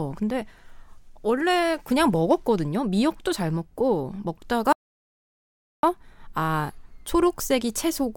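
At 4.73 s the speech cuts off mid-flow into dead silence, with no room tone at all, and returns abruptly at 5.83 s, so about 1.1 s is simply missing. This audio dropout to silence likely comes from the input briefly disconnecting while the recorder kept writing silence.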